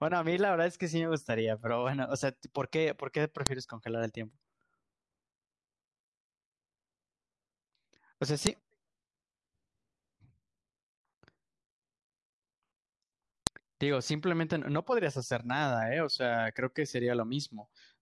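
A speech recording with a sharp, loud click at 3.47 s, again at 8.47 s and at 13.47 s, each over in a couple of milliseconds. That's a file header played as audio: the clicks land every 5 s regardless of what the talker is doing, so the stream was clearly stitched from 5-second WAV pieces without stripping each piece's header, and those few dozen bytes get decoded as a burst of garbage samples.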